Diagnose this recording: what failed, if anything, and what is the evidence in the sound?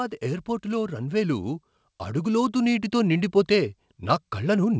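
Automatic gain rising at the call-processing stage: from 0.21 s to the end, voice and background swell together, unlike a talker moving closer, which lifts only the voice.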